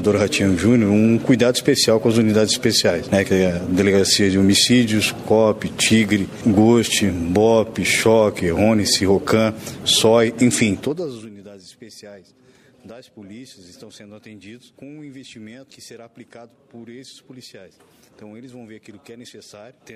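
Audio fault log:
10.72–11.31 s, zipper noise: the level drops by roughly 25 dB here, but in bare 2 dB jumps, around thirty a second, with no smoothing between them. Each jump leaves a tiny click, so the fade comes out as a fast ticking zip.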